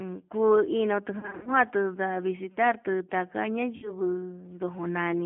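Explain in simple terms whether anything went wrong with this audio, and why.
Two things went wrong, both typical of an internet phone call.

The whole recording went through the G.729 codec, a system that squeezes speech into very little data for calls. It doesn't send the actual sound. It sends a rough description of the voice, and the far end rebuilds it. The phone line also cuts off everything above about 3.4 kHz. So the speech sounds narrow and muffled, and a bit rough and synthetic. You can plainly hear this damage all the way through.

Then there is VoIP packet loss concealed by the speech codec, in two places. Some chunks of the call never arrived. The decoder filled each gap by stretching the last bit of sound it had, letting it fade. That gives a short buzzy or smeared patch. The first is from 1.19 to 1.52 s. About 180 ms went missing there, in bits spread over 280 ms, the longest gap lasting 80 ms. 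The second is from 3.76 to 3.95 s, where about 60 ms went missing. In both, the voice stays weak or distorted briefly after the gap.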